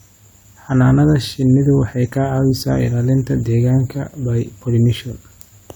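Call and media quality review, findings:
Nothing to log on this one: I listened through the whole speech recording and didn't hear any fault worth raising a ticket for.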